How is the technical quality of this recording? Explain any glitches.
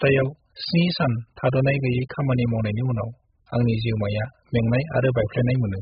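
Technical quality is poor, with one fault running through the whole recording. AAC compression damage, throughout: nothing is present above 5 kHz, and the speech sounds dull, smeared and warbly, with fizzy sibilants. The likely cause is heavy AAC-LC encoding at a very low bitrate, consistent with roughly 8 kbps. At that rate the encoder lowers its cut-off, drops or noise-fills whole bands, and quantises the remaining frequency lines coarsely, which produces the muffled, watery texture.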